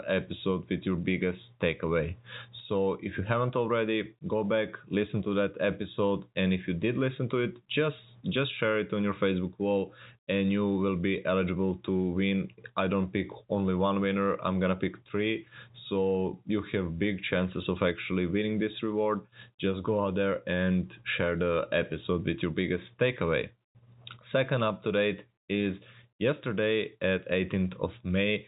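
No technical fault can be heard in the speech, which comes through G.711 telephone coding at 64 kbps with its expected band limit near 3.8 kHz and the usual faint, level-following quantisation noise.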